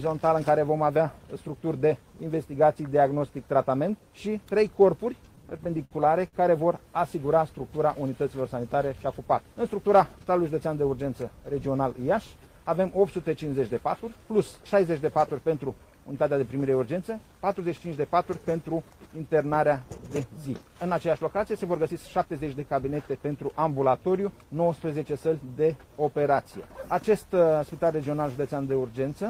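Repeated stalls (stutter) run from 5.35 to 6.36 s. Audio kept arriving late or more slowly than it was played, so the jitter buffer ran dry nine times. At each stall the receiver stretched the last sound to fill the gap, about 194 ms in total and roughly a fifth of that second, with the longest single wait 60 ms. Nothing drops out, but the sound catches and drags in a halting stutter.

Jitter buffer speed-up appears from 17.24 to 17.97 s and again from 21.56 to 22.60 s. Both times the buffer held more audio than it aims for, and the receiver trimmed it back by cutting many tiny pitch-period slices in a row. The first passage plays at 112% speed, shedding around a tenth of a second. The second plays at 107%, losing a bit less. Pitch stays put while the sound briefly hurries forward.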